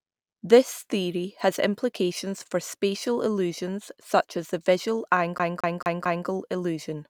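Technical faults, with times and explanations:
5.38 to 6.27 s: CD stuck on one turn. The speech catches and the same 0.22 s slice plays four times, each restart preceded by a brief mute as the laser jumps back a track. The waveform shows identical repeating blocks, and the spectrogram shows evenly spaced copies with thin gaps between them.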